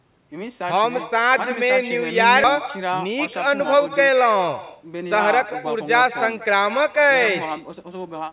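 From the first word to the last, every phrase is followed by a fainter, thinner copy arriving around a fifth of a second later and sitting about 14 dB below the direct speech. This is echo with no canceller: the far end's loudspeaker fed back into its microphone and nothing subtracted it. Room reverberation would smear the tail continuously. Here the copy is a distinct, delayed repeat of the whole utterance.

Between 2.44 and 2.46 s the speech jumps forward with no silence or fill at the join. About a second of audio is simply gone, and the sound on either side is spliced almost directly together. This is a skip ahead: a stretch of audio was dropped while later audio was already waiting, and the delay dropped by roughly that same second. A packet-loss dropout would leave a gap or a concealment buzz. Here nothing marks the cut except the abrupt discontinuity in what is being said.

From 2.56 s until 8.29 s the speech runs at about 105% speed while keeping the same pitch. 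This is a jitter buffer speed-up: the receiver was holding more audio than it wanted, so it trimmed many short pitch-period-sized slices in a row, shaving off around a third of a second in total. The delivery sounds slightly hurried. A resampling error would raise the pitch along with the tempo, and here the pitch stays put.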